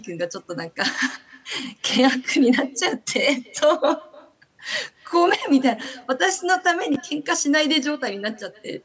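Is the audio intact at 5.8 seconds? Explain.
No. Chunks out of order occur from 5.81 to 5.86 s: a short block of audio, which fits chunks of about 10.7 ms, plays three positions after where it belongs. Nothing is missing, but the sequence is scrambled, so the moment sounds briefly jumbled, with three hard joins. Echo with no canceller also runs through this point. The far end's loudspeaker output reaches its microphone and returns after around 300 ms, so the sound is trailed by a quieter, thinner copy, about 26 dB down.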